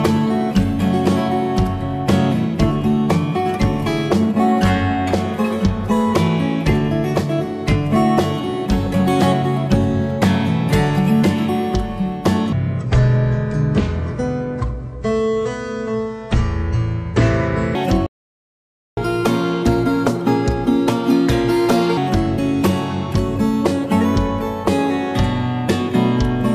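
From 12.53 s to 17.75 s, a section at the wrong speed appears. The stretch was likely played against the wrong clock, at 0.599 times its recorded rate. Because speed and pitch move together, the sound drops abruptly by about ten semitones, close to an octave, and drags noticeably slower. Everything in that stretch turns deep and sluggish, then snaps back to its proper pitch and pace at 17.75 s.

At 18.06 s comes a playback stall. The player most likely ran out of buffered data or had its processing thread blocked, so nothing reached the output for about 0.91 s. The sound cuts off mid-flow into silence and resumes at 18.97 s. That gap is long enough to read clearly as a dropout rather than a natural pause.

Right after the stall, from 18.97 s to 21.97 s, there is a catch-up at higher speed. The player works through the backlog it built up by resampling it at 1.25 times normal speed, so it regains lost time instead of staying behind. 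For those three seconds the sound is hurried and raised by about four semitones, a little bright and rushed. It then settles back to normal speed and pitch.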